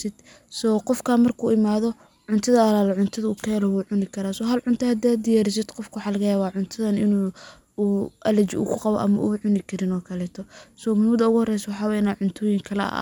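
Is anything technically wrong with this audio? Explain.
No, the speech signal holds together technically throughout, with nothing in it that points to a problem in how it was captured, processed or delivered.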